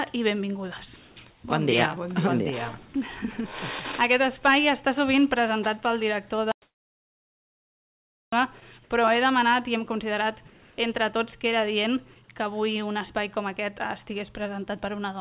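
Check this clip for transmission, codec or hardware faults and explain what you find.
Three kinds of fault turn up: two typical of a call link where the far end stops sending during what it judges to be pauses, plus one stretch of true silence. The audio is also band-limited, with nothing above 4 kHz, which fits a G.711 mu-law call path.

Sound dropped by the voice detector, at 0.96–1.16 s, 2.88–2.94 s and 8.60–8.62 s: the sound gives way to flat synthetic hiss, then resumes. The sender's detector likely misjudged the sound as background and stopped sending. Unlike a dropout, the gaps are filled with noise rather than silence.

Comfort noise in place of the background, at 1.30–1.44 s (about 6 dB quieter) and 10.50–10.78 s (about 2 dB quieter): in the pauses, the real room tone turns into smooth, detail-free noise. Likely discontinuous transmission, with the receiver generating filler. No wanted sound is lost, just the background texture.

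Audio dropout to silence, from 6.52 to 8.33 s: the sound cuts off abruptly and about 1.8 s of dead silence follows, with no room tone at all. This is likely a lost input or link, with silence written in place of audio. The complete silence sets it apart from the comfort-noise gaps.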